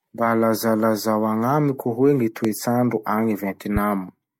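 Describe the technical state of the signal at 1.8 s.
At 1.8 s the signal is intact, with no audible fault at that moment.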